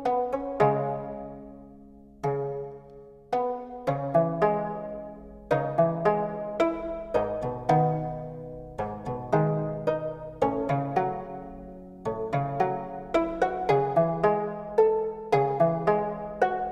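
No technical fault can be heard anywhere in the audio; the signal holds steady throughout, with no interruptions, distortion or level problems.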